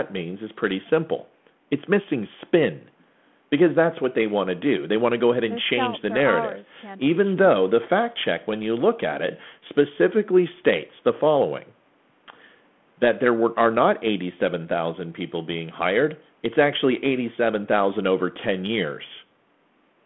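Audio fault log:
No faults heard anywhere in this speech recording.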